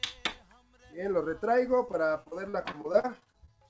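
Repeated packet loss, giving a robotic sound, runs from 1.86 to 3.5 s. Thirteen short gaps, none longer than 41 ms, open one after another, and each is patched by stretching the sound just before it. About a fifth of that stretch is synthetic fill, roughly 316 ms in all, so the audio turns choppy, with small pieces missing. Through this stretch the G.722 call path's 8 kHz ceiling stays in place.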